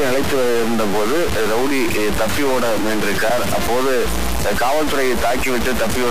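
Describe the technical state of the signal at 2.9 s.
At 2.9 s, as throughout the clip, harsh buzzy distortion and noisy pauses point to a likely stuck bit, offsetting samples by roughly -15 dBFS steps, seen as squared waveform jumps and broadband spectrogram haze.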